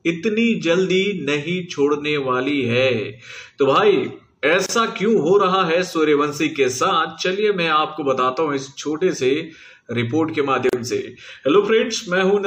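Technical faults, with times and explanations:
4.66–4.69 s and 10.69–10.73 s, gap at a join of encoded pieces: 6-second pieces were encoded separately and joined untrimmed, so encoder delay and padding leave 30 and 37 ms silences before the sound resumes where it stopped.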